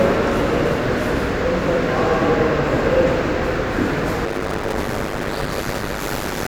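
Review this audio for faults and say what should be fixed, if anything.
From 4.25 s to the end, a block size mismatch (padded) zero-fills each block. The waveform shows regular gaps, and the spectrogram shows 100 Hz buzz harmonics. Playback runs at 0.533 speed with near-normal pitch, which fits 256-sample writes into 480-sample reads. To prevent it, match writer and reader block sizes, or buffer between them instead of zero-padding.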